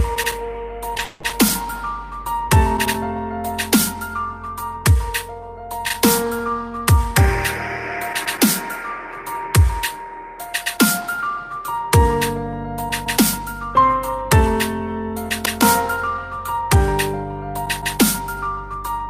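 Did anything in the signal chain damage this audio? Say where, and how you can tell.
Yes, repeated stalls (stutter) from the network, 0.97 to 1.52 s: four gaps filled by stretching the last sound, longest 190 ms. Nothing goes missing, unlike packet loss.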